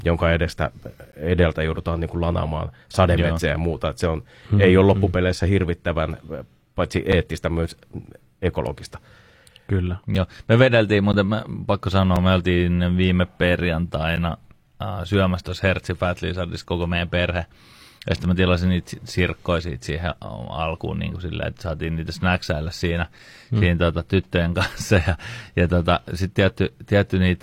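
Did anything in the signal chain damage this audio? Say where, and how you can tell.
Yes. The speech drops into brief hard-edged silences at 1.12 s (after "jonka edestä"), 7.12, 10.15, 11.13, 12.16, 14.16, 18.16 and 23.19 s. Each is 3 to 13 ms long and falls just after a whole second. This is a gap between stream segments at the playback stage. Timestamps of adjacent one-second segments don't quite meet, so the player pads the difference with silence, and no audio is lost.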